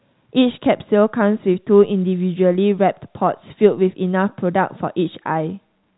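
Speech carried over a 64 kbps G.711 A-law telephone path with its expected narrow telephone bandwidth and faint level-tracking quantisation hiss, and no technical faults found.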